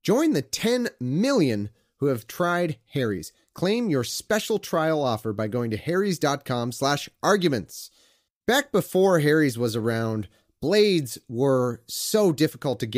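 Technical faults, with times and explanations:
No technical faults detected.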